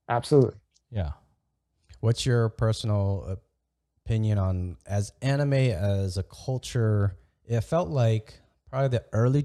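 Nothing stood out as a technical fault when listening to this recording of speech.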